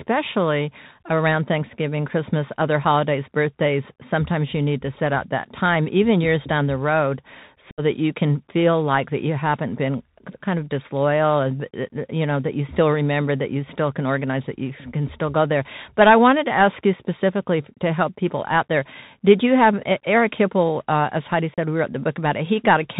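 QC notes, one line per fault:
Throughout: Bluetooth CVSD headset codec. The speech is narrowband and dull, with nothing above 4 kHz, scratchy s sounds, distorted loud high passages and a granular hiss beneath. Each 64 kHz one-bit up/down sample with an adaptive step cannot keep pace with fast, bright sounds.
7.71–7.82 s and 21.54–21.58 s: unconcealed Bluetooth headset packet loss. After "years down the road" and again after "hipple uh as heidi", there are abrupt holes of about 67.5 ms and 37.5 ms. Speech resumes briefly quieter at "that you can feel" and "we wrote the". Silence or an idle pattern filled in for lost voice packets, which fits around ten and five packets.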